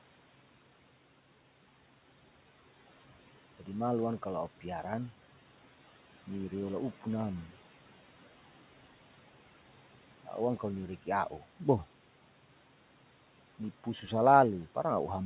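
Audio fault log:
throughout noise suppressor artifacts. The steady room noise, about 19 dB below the speech, is pulled down by about 12 dB. Band by band, frame by frame, the suppressor lowers what it judges to be noise. The noise sinks in the gaps and rises again under the speech.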